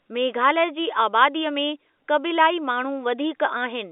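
No technical faults occur at any point in this speech recording, which comes through as ordinary telephone-band audio.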